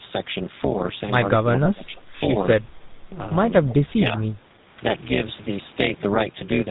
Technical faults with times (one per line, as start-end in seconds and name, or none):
0.00-6.71 overlap-add ripple
0.00-6.71 GSM full-rate codec
1.64-1.68 lost GSM frames